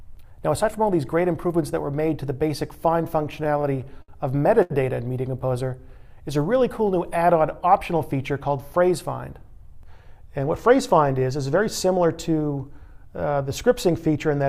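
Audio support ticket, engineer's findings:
Repeated stalls (stutter), 3.17–4.10 s: ten holds, 140 ms of fill in all, longest 61 ms, about 15% of that stretch. Jitter buffer kept running dry, receiver stretched the last sound each time. Nothing lost, just drags.

Short stall from a late packet, 4.62–4.72 s: one 79 ms hold. Packet showed up late, buffer emptied, receiver stretched the last sound, then carried on from the same spot. Nothing skipped, sound just held too long.

Jitter buffer speed-up, 9.97–10.69 s: plays at 104% speed, pitch unchanged, around 40 ms trimmed. Buffer held more than its target, so the receiver cut small pitch-period chunks back to back to bring the delay down.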